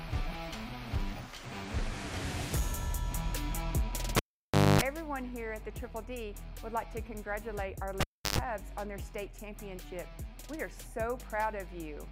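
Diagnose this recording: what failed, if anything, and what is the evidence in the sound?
Analogue wiring failed: the cable was pulled and plugged in twice, at 4.17–4.81 s and 8.01–8.39 s. Each event shows a pop spike on the waveform, a near-flat dropout (about 600 ms, then 330 ms), and 50 Hz buzz with harmonic stripes on the spectrogram (250 ms, then 115 ms) while only the plug tip connected, ending in a second pop.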